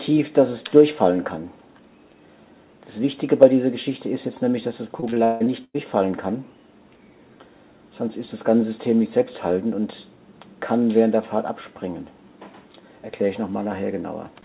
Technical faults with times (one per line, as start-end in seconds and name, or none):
5.00-5.76 repeated packet loss (robotic sound)